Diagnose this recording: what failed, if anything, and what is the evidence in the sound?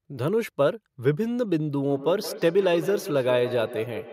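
The failure is in call processing: a feedback echo between two devices. From 1.87 s to the end of the speech, the sound returns roughly every 150 ms, peaking at about 12 dB below the direct speech. A second device in the room plays what the first microphone sent, and the first microphone picks it up again. Each echo canceller removes only what its own device plays, so the loop escapes both. A single device's echo-canceller failure would return once, not recirculate.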